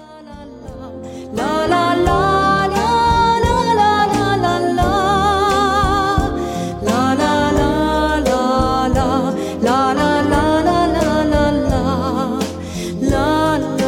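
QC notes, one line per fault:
No faults found: the signal stays continuous and steady throughout, with nothing audible that calls for attention.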